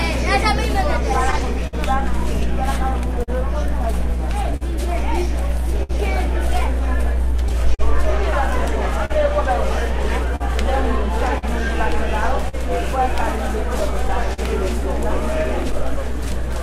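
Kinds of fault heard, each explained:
Clock drift between sender and receiver: The sender's clock runs about 4 percent slow, so the receiver's buffer keeps draining and small timing hiccups recur throughout the clip.
Scattered short gaps: About twenty brief holes between 1.09 and 15.96 s, the longest around 70 ms, are filled by extending the preceding sound, leaving brief smears and ticks.
Repeated timing corrections: From 1.59 to 16.54 s the receiver repeatedly inserts short repeated pieces, adding roughly 70 ms overall in small, unevenly spaced edits.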